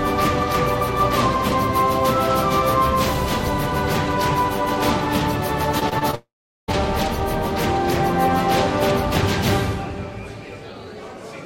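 The audio turns choppy from 5.79 to 6.15 s, the sign of repeated packet loss (robotic sound). Four short holes, the longest about 22 ms and roughly 80 ms in all, are each patched by repeating the preceding sound, so about a fifth of that span is synthetic fill. At 6.15 s the sound stretches into a fading buzz and then falls to about 400 ms of silence before returning at 6.70 s with roughly 540 ms of material gone, most likely a long network dropout that stopped packets arriving.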